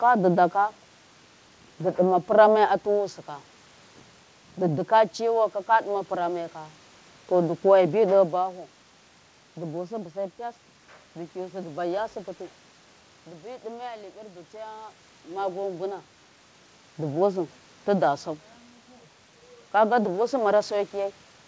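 Nothing stood out on listening: the speech carries the room's own background noise, its level shifts around 8 s and again around 15 s as the talker moves relative to the microphone, and its top end stops at 8 kHz, which fits a wideband call codec such as G.722.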